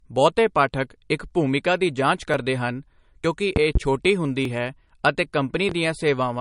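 Throughout, the speech carries plainly audible codec damage, a watery or swirly quality where weak frequency detail flickers in and out from frame to frame. This is likely MP3 compression at a low bitrate, and the sound fits something around 44 kbps. Starved of bits, the encoder discards the weaker spectral lines, and attacks lose their definition.

At 2.34 s, right after "ਇੱਕ ਭੂਮਿਕਾ ਦੀ ਜਾਂਚ", the sound jumps forward with no gap of silence, skipping a few milliseconds. A second jump at 3.25 s loses about 20 ms. A third at 4.45 s, just before "ਹੈ ਅਤੇ", again skips a few milliseconds. These are dropped buffers, likely from an overrun: the program didn't read its samples before the hardware overwrote them, so each missing piece was cut out and the audio on either side was joined directly.

Between 3.56 and 3.79 s there are two loud pops in succession, about 15 dB above the speech, which carries on underneath them. 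A single loud pop follows at 5.69 to 5.73 s, just after "ਹੈ ਅਤੇ", at about 5 dB above the signal. Each is likely a sudden voltage step or pulse added to the signal, such as a plug, switch, static discharge or driver glitch, and the circuits after it shaped that pulse into an audible pop.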